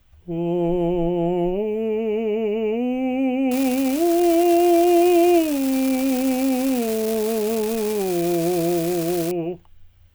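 A music clip carries an unreliable data bit from 3.51 s to 9.31 s. One line in the digital path is marginal, so that bit flips in a random share of samples and each flip adds a spike of identical height, about -17 dBFS. The result is an even crackling fizz that continues through quiet moments. Vinyl crackle or dropouts would instead vary in size.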